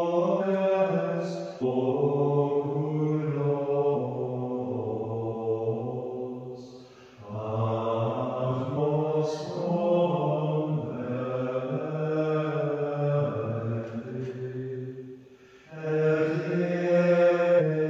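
Five brief glitches, each about 50 to 60 ms, break the audio at 0.38–0.44, 1.58–1.64, 3.90–3.96, 8.73–8.78 and 17.56–17.62 s: damaged data in a compressed stream, where the decoder misreads corrupted frames and resyncs.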